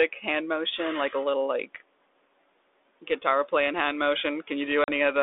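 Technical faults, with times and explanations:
4.84 to 4.90 s, packet loss on an ADPCM call: the speech cuts to a hard-edged silent gap of about 40 ms, then returns with a little distortion before settling within a few tens of milliseconds. About two packets went missing and were replaced by silence. The decoder's adaptive predictor and step size, which follow the 32 kbit/s G.726 stream sample by sample, drifted away from the sender's and needed a moment to realign.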